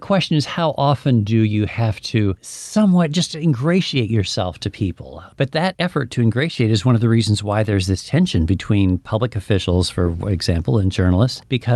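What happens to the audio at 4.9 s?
Nothing goes wrong at 4.9 s: the speech there comes through intact, carried by the Opus call path with its normal band-limited sound topping out around 12 kHz.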